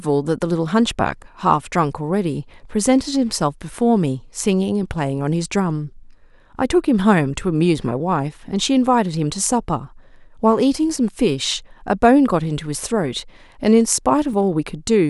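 From about 1.67 s to 14.33 s there's a click in the speech roughly every 3.17 s, five or so in all. That steady spacing points to clock drift buffer slips: two devices likely running on separate clocks that disagree by something like 200 ppm. The buffer between them creeps until a short block, a few dozen samples, gets dropped or repeated, and each of those jumps is what you hear as a tick.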